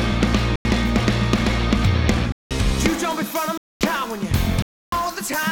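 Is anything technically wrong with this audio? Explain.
Yes. There are four blocks of digital silence, at 0.56–0.65 s, 2.32–2.51 s, 3.58–3.81 s and 4.62–4.92 s, lasting 93 to 299 ms. The output buffer went unfilled, which fits 4096- and 8192-sample blocks. Each hole starts and ends abruptly.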